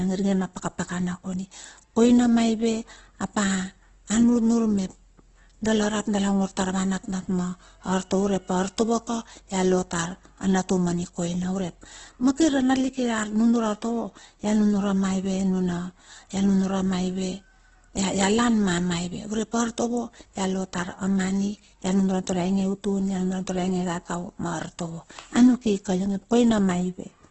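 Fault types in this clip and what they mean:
Opus compression: The speech has likely passed through an Opus encoder starved of bits, with heavy damage that fits a rate near 12 kbps in its music (CELT) mode. The encoder preserves each band's overall energy but rebuilds the missing detail from folded copies of lower bands or from noise. The voice therefore sounds rough and grainy rather than swirly. The band is also trimmed to wideband, leaving nothing above 8.1 kHz.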